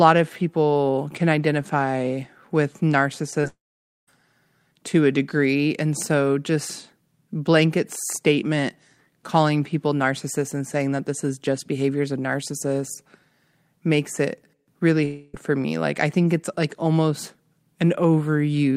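At 3.41 to 3.45 s there is a short concealed packet loss. About 20 ms of the speech failed to arrive and was patched by extending the preceding sound before blending back, leaving a brief smear or wobble just ahead of the next fault.

From 3.47 to 4.09 s comes a long network dropout, the likely cause of the gap. The last sound is stretched into a fading buzz or hiss, then roughly half a second of silence follows before speech resumes with about 0.6 s missing. At 15.05 to 15.35 s a second long dropout conceals about 0.28 s with a continuous fading fill and no silent stretch.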